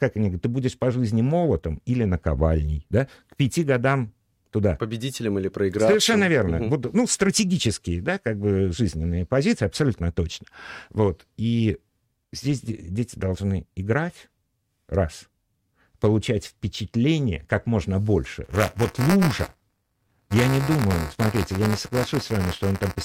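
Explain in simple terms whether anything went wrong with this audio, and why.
Buffer tearing starts at 18.44 s, right after "впечатление как можно больше", and runs to the end. The program filling the audio buffer and the playback hardware slipped out of step, so a small slice of each buffer replays sound about 20 ms old, giving a robotic 200 Hz buzz.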